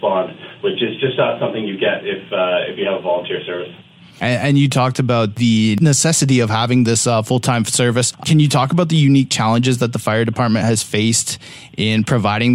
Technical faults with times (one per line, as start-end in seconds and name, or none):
none